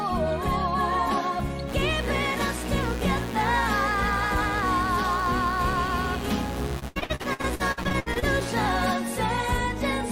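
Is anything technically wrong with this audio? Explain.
Yes, there are two faults, and they overlap near the end.

From 1.66 s to 8.88 s there is mains buzz. Sharp switching spikes from a dimmer, a rectifier or an unshielded line entered the signal path twice per cycle of the 60 Hz supply. Because the spikes are abrupt, they produce a dense ladder of 60 Hz harmonics reaching into the kilohertz range. The result is a steady, rasping buzz sitting only moderately below the wanted sound, not a soft low hum.

From 6.79 s to 8.24 s the stream suffers repeated packet loss, which produces robotic sound. Data arrived late or not at all, over and over, and each hole was papered over by extending the last received sound before the next dropout arrived. About 39% of this stretch is filled-in sound, with the longest hole around 80 ms. It comes across as choppy, with pieces audibly missing, all on top of the continuing buzz.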